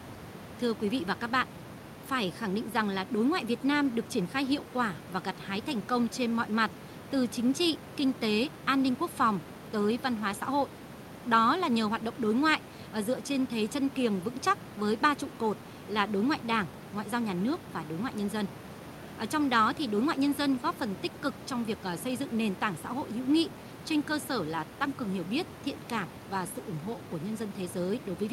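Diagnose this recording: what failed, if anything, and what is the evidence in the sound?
Nothing failed; room noise sits about 16 dB below speech.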